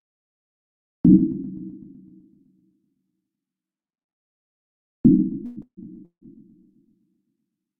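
Three call audio freezes occur, at 5.45–5.58 s, 5.62–5.79 s and 6.05–6.23 s. Each lasts 0.11 to 0.16 s. A brief fading buzz fills them, dropping to silence in the last two. Delayed packets likely emptied the jitter buffer. Playback then resumes later, with nothing lost.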